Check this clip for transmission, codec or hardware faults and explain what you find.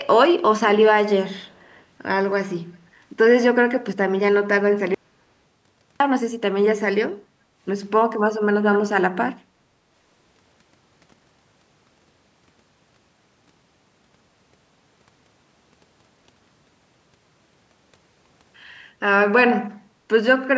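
Three faults turn up in this speech clip: an echo leak, an audio dropout to silence, and a background dip caused by echo-canceller gating.

From 1.36 to 1.83 s a very faint delayed copy of the speech trails the original by about 369 ms. The likely cause is an echo leak: a far-end loudspeaker's sound reached that side's microphone, slipped past its echo canceller, and was sent back as a weak repeat.

From 4.94 to 6.00 s the audio cuts to silence for about 1.06 s, with no room tone, then resumes mid-flow. This is likely an audio dropout to silence: the input was lost while the recorder kept writing silence, so that stretch of speech is gone.

From 7.23 to 7.57 s the background is gated by the echo canceller. The canceller clamped the microphone while the loudspeaker was active, so the room sound sinks by up to about 9 dB for roughly a third of a second before recovering.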